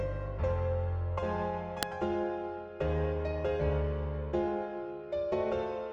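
A single sharp snap at 1.83 s, an electrical switching spike peaking around -10 dBFS, is likely an arc from nearby switching; it shows as a thin vertical broadband line on a spectrogram and a lone needle on the waveform.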